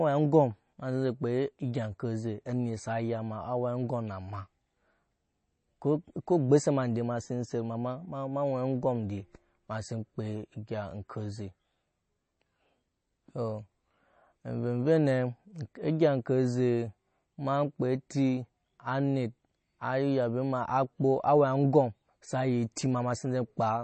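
Speech with MP3 compression throughout: a hard ceiling near 8.3 kHz plus watery, swirling sibilants, which a plain low-pass filter wouldn't cause, likely from a bitrate around 32 kbps.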